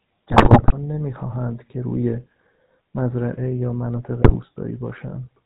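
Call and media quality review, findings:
GSM full-rate codec, whole clip. Buzzy, gravelly speech, consistent with 13 kbps full-rate coding. The vocal-tract model is driven by a sparse, regularly spaced pulse excitation, which gives the rasp. Spectrogram: hard ceiling at 4 kHz, smeared harmonics, grainy fill between pitch lines. Waveform: coarse, slightly jagged periodicity.

GSM bit errors, 0.30–0.73 s and 4.22–4.36 s. Squawks, pops and gargling inside already-coded speech. Corrupted filter, pitch and gain parameters at roughly a 6% error rate make each hit frame decode with a warped spectrum or a level surge. The first span fits about 21 codec frames. Spectrogram: blotchy broadband smears and displaced formant bands. Waveform: sudden amplitude spikes and irregular bursts.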